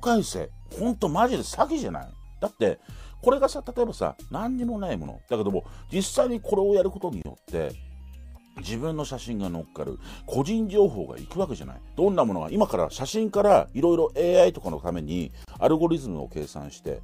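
At 7.22 s and again at 15.45 s the sound drops out briefly, for about 28 ms and then about 32 ms, before resuming exactly where it stopped. These are gaps at joins of encoded pieces: each section was encoded on its own and spliced untrimmed, so the encoder's leading delay and last-frame padding remain as silence. On a waveform each shows as a flat notch with abrupt, slightly smeared edges. A spectrogram shows a thin empty vertical band.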